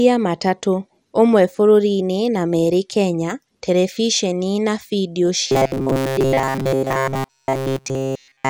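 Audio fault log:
throughout: MP2 compression, likely the cause of the dull, gurgling, grainy texture heard over the whole clip. The upper range flickers as whole high sub-bands switch on and off while the bands that remain carry coarse quantisation noise. The damage is plainly audible, consistent with a rate around 80 kbps. Unlike MP3 or AAC artefacts, the grain sits in broad fixed slices rather than swirling, metallic pre-echo around transients.
5.48 to 8.50 s: robotic sound from repeated short buffers, likely caused by audio arriving too seldom so the playback repeats its last short block while fresh audio is dropped. Essentially all of this stretch is repeated material, producing a rigid metallic buzz locked at 134 Hz. That pitch fits a block of about 7.5 ms. The speech contour still roughly follows through. That fixed buzz distinguishes it from comb filtering or flanging, which colour the sound without imposing one steady tone.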